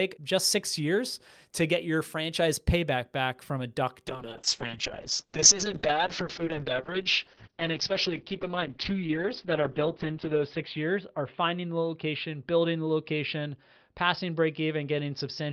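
Speech with a call bitrate drop starting at 4.08 s and lasting to the end. The encoder's rate falls from 40 kbps to 6 kbps, holding at its lowest for about 5.9 s, and the audio bandwidth narrows from 20 kHz to 6 kHz, so the speech turns muffled and rough. Unlike a simple low-pass filter, the coarse coding also adds a watery, grainy texture, and unlike packet loss there are no gaps or repeated fragments.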